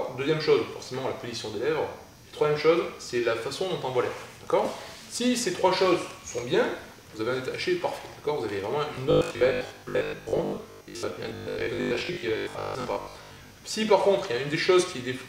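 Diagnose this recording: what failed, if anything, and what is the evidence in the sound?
Buffer stage. From 8.95 to 13.57 s, robotic sound from repeated short buffers forms a rigid 50 Hz buzz. Likely starvation, so roughly half the audio is replaced by 20 ms repeats.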